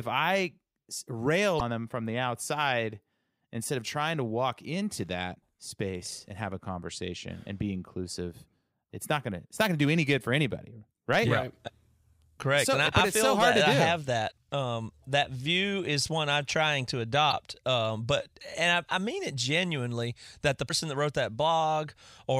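Damaged data in a compressed stream breaks the speech five times, at 1.56, 5.32, 14.28, 17.28 and 20.65 s, each event lasting roughly 40 to 60 ms. At these points the compressed data is corrupt, so the decoder misreads or rejects the affected frames and loses sync until it finds the next valid frame header. Each event sounds like a short chirp, squawk, click or brief hole cutting across the speech.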